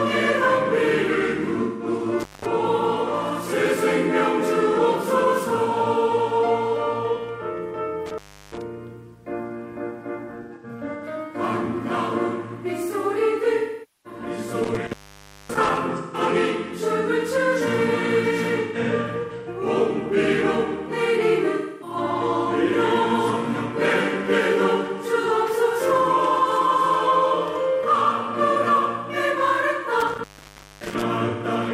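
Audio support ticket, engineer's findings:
AAC frame loss with concealment at 1.63–1.87, 10.42–11.04, 13.57–14.19, 15.96–16.20, 18.61–19.49, 21.56–21.96 and 31.28–31.44 s. Smeared, noisy, phasey patches. Decoder refills missing frames from the last good spectrum. Worst at 13.57 s, about 470 ms filled. At 10.42 and 18.61 s the gaps are scattered bursts.

Intermittent contact at 2.20–2.46, 8.06–8.64, 14.64–15.78 and 30.00–31.03 s. Sound drops out with crackle at the edges and faint hiss beneath. Probable loose cable or plug. Line open for 190, 342, 563 and 575 ms.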